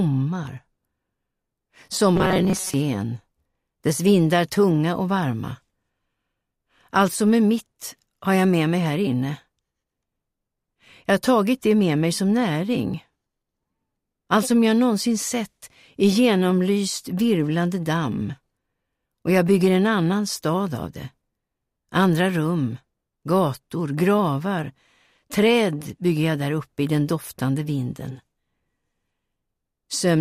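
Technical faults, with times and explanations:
2.16 to 2.74 s, robotic sound from repeated short buffers: for a little over half a second the sound turns into a rigid, metallic buzz fixed at 188 Hz, keeping only the rough outline of the original. The likely cause is audio arriving too seldom, so playback keeps looping a fragment of about 5.3 ms while most of the real material in that stretch is skipped, and the loop rate imposes its own pitch.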